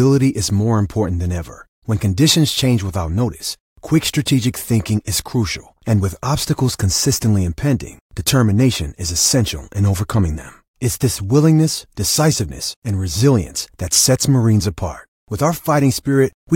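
No technical faults can be heard anywhere in the speech recording.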